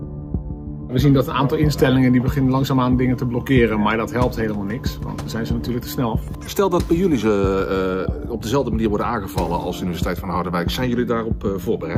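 No technical faults can be heard anywhere in the recording.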